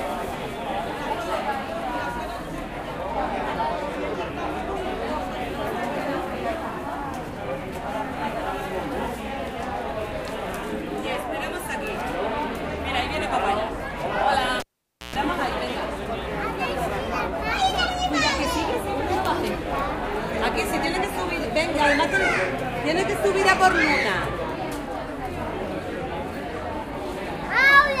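A cable pulled and plugged in breaks the audio from 14.6 to 15.16 s: a pop, 0.51 s of near silence that includes 0.12 s of 60 Hz mains buzz while only the plug tip makes contact, and a second pop as the sound returns.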